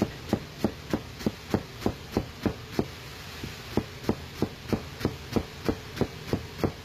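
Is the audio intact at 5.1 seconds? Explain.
No. At 5.1 seconds the audio carries HE-AAC compression damage, which runs through the whole clip. The treble is likely rebuilt by spectral band replication from copied lower bands. It sounds gritty and metallic, stops near 14.9 kHz, and fits a bitrate near 20 kbps.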